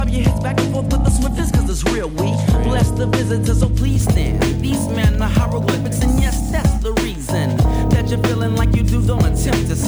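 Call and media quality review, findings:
Crude rate conversion, 3.79 s to end: gritty inharmonic fizz tracking loud, high content, about 25 dB below signal. Resampler repeating samples with no filtering, pattern consistent with a 2:3 step such as 32 kHz to 48 kHz.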